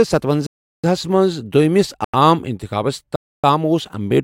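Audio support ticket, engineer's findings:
Block of digital silence, 0.46–0.84 s (about 370 ms), ending just before "ہَس منٛز دوٚیِمس عام". Hard cut to silence. Consistent with an output buffer not filled in time, fits a 16384-sample block. Again at 2.04–2.14 s (about 93 ms) between "ہَس منٛز دوٚیِمس" and "عام انتخابس", fits 4096 samples, and at 3.16–3.44 s (about 280 ms) after "منٛز دوٚیِمس عام انتخابس". Speech drops out abruptly, no fade.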